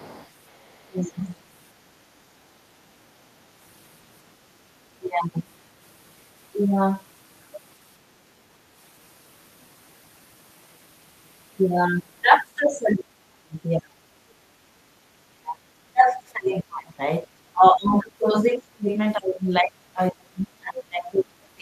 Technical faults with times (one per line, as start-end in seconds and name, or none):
0.00-1.13 other side's voice leaking through
0.87-1.23 speech suppressed in double talk
4.98-5.28 speech suppressed in double talk
12.58-14.03 speech suppressed in double talk
15.29-16.93 speech suppressed in double talk
17.24-18.22 speech suppressed in double talk
18.53-21.62 speech suppressed in double talk